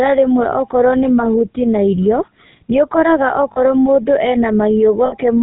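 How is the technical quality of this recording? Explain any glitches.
Technical quality is limited. The speech has passed through the GSM full-rate codec throughout, with plainly audible damage. The encoder models the vocal tract and excites it with sparse regular pulses. Nothing above 4 kHz survives. Voices turn buzzy and gravelly.

At 3.52 s and 5.06 s there are lost GSM frames, about 40 ms and 60 ms long. The decoder repeated the last good frame. Each gap becomes a brief rough, metallic ring.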